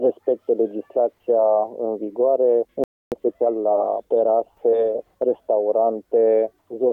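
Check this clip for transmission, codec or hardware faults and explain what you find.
Two faults are audible, a stall followed by a catch-up.

From 2.84 to 3.12 s, a playback stall: the sound cuts out for about 280 ms, most likely because the player ran short of data or its output thread was blocked.

From 3.12 to 3.66 s, time-compressed catch-up: the player trims its backlog by splicing out short segments, so the audio runs about 1.5 times fast at unchanged pitch.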